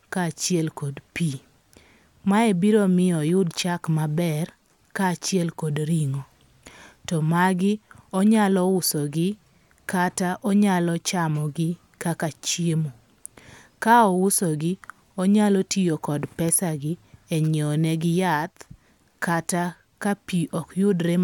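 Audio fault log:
No audible faults detected.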